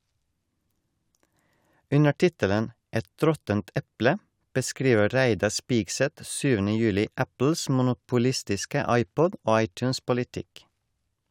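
Nothing goes wrong anywhere in this bit of speech, so there's no technical fault to point to at any moment.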